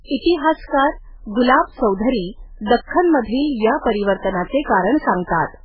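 Heavy MP3 compression runs throughout this speech clip: nothing survives above 5.2 kHz, and weak frequency lines flicker frame to frame, giving a watery, swirly sound, likely from a very low bitrate around 8 kbps.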